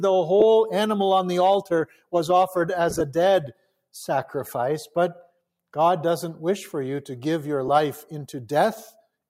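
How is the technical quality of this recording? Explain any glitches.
The recording has two recurring faults: brief dropouts from lost LE Audio frames, and passages the noise suppressor pulled down.

Lost LE Audio frames occur at 0.40 s (15 ms), 2.90–3.01 s (67.5 ms missing, scattered across about 105 ms in short gaps), and 7.68 s (7.5 ms), which fits 7.5 ms frames. The LC3 decoder fills each gap with the previous spectrum with randomised phase, so tones briefly become a short noisy smear.

The noise suppressor cut sound at 1.63–2.14 s, dropping it by up to about 19 dB, and at 3.47–3.71 s, by up to about 18 dB. It treated this material as noise, so the level sinks for a fraction of a second each time.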